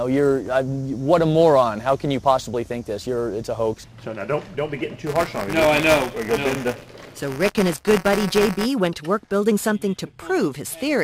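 From 5.06 to 8.66 s, buffer tearing produces a steady robotic buzz at 188 Hz, which fits a 256-sample buffer. Writer and reader pointers have slipped, so a small slice of each buffer replays audio from about 20 ms earlier. Unlike dropouts, nothing goes silent, and the buzz vanishes whenever the signal does.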